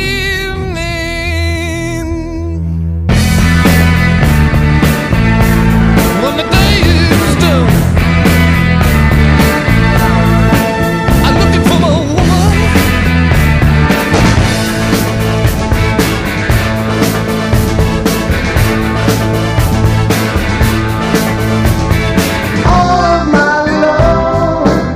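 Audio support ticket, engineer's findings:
Hard clipping, throughout. Peaks flattened at the converter or gain-stage ceiling, signal driven roughly 9 dB past full scale, about one sample in twenty cut flat. Flat tops add high harmonics, heard as harsh fuzz on every loud passage.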